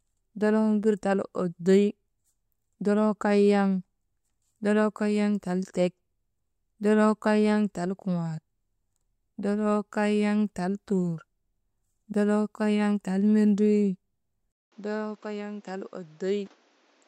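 Speech, with a sudden change of character at 14.52 s that persists to the end. A gap of about 200 ms of silence opens at that point. After it the sound is duller and boxier, with nothing above 7.7 kHz, the level drops by around 10 dB, and a new background noise floor sits roughly 30 dB under the speech. This is likely an input switched to a poorer device in mid-recording, with its narrower band, different gain and own noise.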